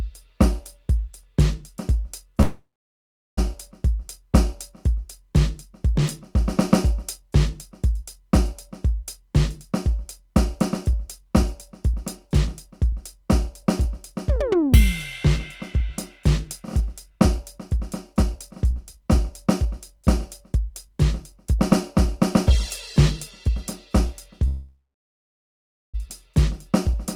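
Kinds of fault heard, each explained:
Call audio freeze: at 2.41 and 24.48 s the music stalls, the last sound stretches into a fading buzz or hiss that sinks to silence, for about 0.96 s and 1.46 s, then it resumes where it stopped, nothing lost; likely packets held up in transit emptying the jitter buffer.
Jitter buffer speed-up: from 10.50 to 15.90 s the music runs about 2% fast, and from 16.82 to 24.47 s about 4% fast, at unchanged pitch, as the receiver trims short pitch-period slices to shrink an overfull buffer, so the tempo loses its steadiness.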